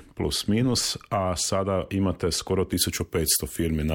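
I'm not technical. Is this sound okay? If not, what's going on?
No. Pre-emphasis left on, from 2.72 s to the end of the clip. Some recording and broadcast chains deliberately boost the treble so it survives noise, then cut it back by the same amount on playback. Here the cut-back step never happened, and the shape of the boost fits the kind used in FM radio. As a result, the last part sounds thin, harsh and overly bright, with hissy high sounds jumping out.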